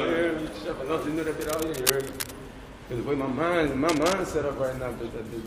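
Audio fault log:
1.41–2.31 s and 3.88–4.14 s, cable scratch noise: two patches of dense, ragged scratching sit over the sound, only a few dB under it. That's likely a worn cable or connector being moved, its contact resistance jumping around and spitting uneven bursts of noise.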